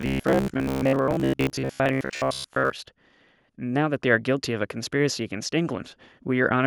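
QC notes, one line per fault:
0.02–2.73 s, robotic sound from repeated short buffers: speech collapses into a rigid metallic buzz at 66.7 Hz that loosely tracks the words. This is likely from late-arriving audio being padded by looping roughly 15 ms segments, with around two thirds of the audio skipped.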